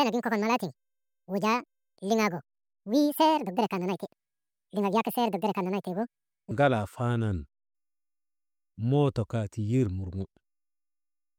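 A speech recording whose opening runs high and hurried: from 0.0 to 6.51 s it plays about 1.74 times too fast, raising the pitch by around ten semitones. This section at the wrong speed is likely from playback or editing against the wrong clock.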